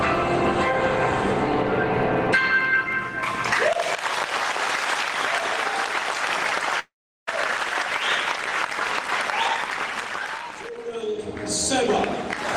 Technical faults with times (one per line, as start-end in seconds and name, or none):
6.79-7.29 long network dropout
10.43-11.19 jitter buffer speed-up